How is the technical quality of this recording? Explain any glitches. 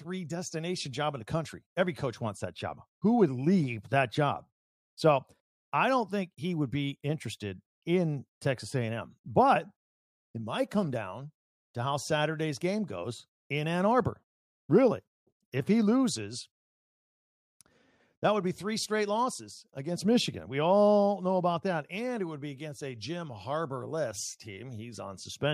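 No audible technical faults turn up anywhere in the speech recording, so there are no glitches to explain.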